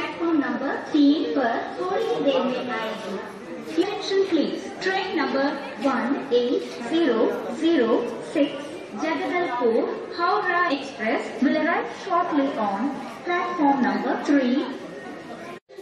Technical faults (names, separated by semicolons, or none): damaged data in a compressed stream